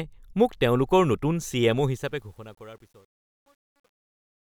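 From 1.78 s to the end at 4.45 s, the fade-out is rendered with too few bits and no dither, a resolution that fits about 10 bits. This is truncation distortion on a fade. As the level drops toward the smallest step, the waveform collapses into coarse square steps. From 2.31 s onward the tail of the speech turns gritty rather than dissolving cleanly.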